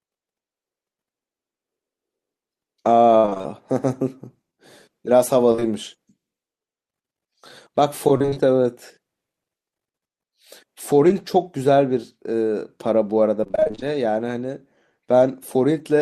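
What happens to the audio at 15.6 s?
Nothing goes wrong at 15.6 s; the speech plays through that moment intact, with no dropout, click or distortion.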